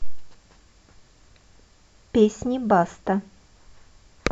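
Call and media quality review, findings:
No faults found in the speech recording. No symptom to log against any component in the chain.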